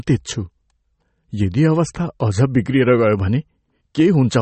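It's a short speech clip, and the whole thing has that watery, swirly texture, with the s sounds turning chirpy and metallic and the consonant attacks smeared. Nothing comes through above about 8.4 kHz, a hard treble cutoff. That points to MP3 compression as the likely cause, squeezed to a bitrate that fits something around 32 kbps. The encoder ran short of bits, cut the top end, and kept dropping weak frequency detail in and out from frame to frame.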